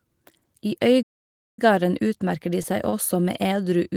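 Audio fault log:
1.02–1.59 s, playback stall: The player most likely ran short of data or had its output thread held up, so nothing reached the output for about 0.55 s. The speech cuts off mid-flow into a gap of silence, then picks up again with "utmerker de seg også". It sounds like a hang followed by a resumption.
2.90–2.95 s, short stall from a late packet: A packet arrived about 29 ms behind schedule and the jitter buffer ran dry. The receiver held the last sound for those 29 ms while it waited, then carried on from the same spot, so no audio is lost. Just after "utmerker de seg", a sound lingers slightly too long with a slight buzz or dip, and everything after it is shifted about 29 ms later.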